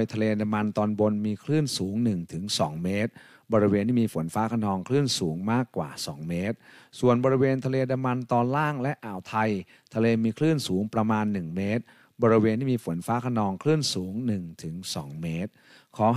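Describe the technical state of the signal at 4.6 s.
The speech signal at 4.6 s is intact, with no audible fault at that moment.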